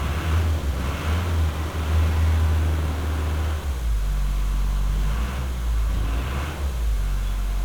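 1-bit DFPWM compression runs throughout: each sample nudges an adaptive level up or down, leaving heavy broadband fuzz and crackle, treble buried in hiss, consistent with a roughly 48 kbps stream.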